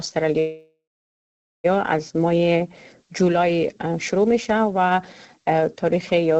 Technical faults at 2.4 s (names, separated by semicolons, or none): none